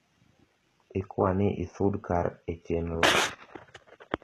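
The treble sounds gritty and synthetic throughout, with s sounds turning lispy and metallic and nothing above 12.3 kHz, likely from HE-AAC compression rebuilding the upper band by copying lower harmonics upward at a low bitrate.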